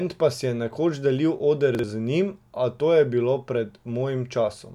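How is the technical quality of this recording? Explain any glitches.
There is one glitch, a chunks out of order fault between 1.75 and 1.84 s. A roughly 43 ms block of speech plays one chunk late, after the block meant to follow it, so there are three hard joins and the moment sounds jumbled. Unlike a dropout or a repeat, no sound is missing or heard twice.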